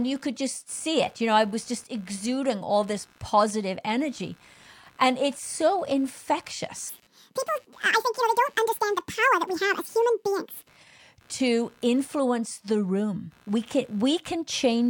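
Computer activity noise runs throughout this speech: a buzz pulsing near 70 Hz, about 35 dB below the voice, as computer load shifts the shared audio ground. A section at the wrong speed spans 6.89 to 10.69 s, played 1.84 times fast and about ten semitones high, likely from a mismatched clock.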